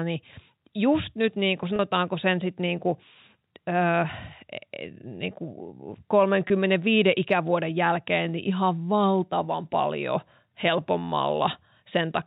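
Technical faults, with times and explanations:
1.76–1.79 s and 6.48–6.50 s, packet loss with pitch repetition: gaps of 30 ms and 20 ms, consistent with two or three 10 ms packets, are bridged by repeating the last pitch period, so the G.711 telephone-band speech briefly holds a slightly buzzy, sustained tone.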